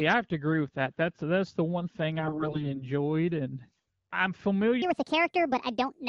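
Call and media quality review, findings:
AMR bit errors, 2.19 to 2.84 s, after "that's the one thing", before "and I'm". Hoarse, scratchy, gargly voice; pitch and level roughly held. Around a fifth of weakly protected bits flipped over about two dozen AMR-WB frames; checksum passes, so pulses and fine parameters decode wrong.

Section at the wrong speed, 4.82 s to end, from "and I'm". Speech high and hurried at 1.54x, roughly seven semitones up. Likely a playback or edit clock mismatch; pitch and tempo shift together.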